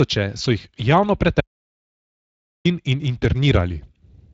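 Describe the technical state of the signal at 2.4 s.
At 2.4 s the signal is in an audio dropout to silence. It runs from 1.41 s to 2.65 s, about 1.24 s in all, and starts right after "so jih javno". The sound cuts off abruptly to silence, with no room tone or noise floor. The input was likely lost, through a disconnected source, a broken link or a mute, while recording carried on writing silence. Whatever was spoken in that span is gone.

The Speex codec damage runs through the whole clip, so it frames this gap on both sides. Speex is a CELP speech codec. It models the voice as a filter driven by a coded excitation, and here it has too few bits for that excitation. The speech around the gap sounds plainly grainy and hoarse. That fits a Speex setting near 20 kbps.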